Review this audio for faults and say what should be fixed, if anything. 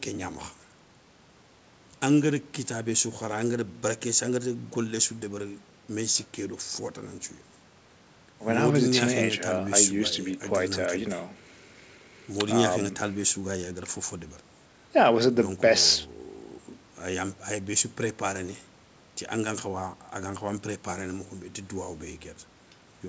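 Nothing here needs fixing, since the speech comes through an ordinary call chain at 64 kbps with G.722, and the top end stopping at 8 kHz is simply what that codec and the microphone processing do.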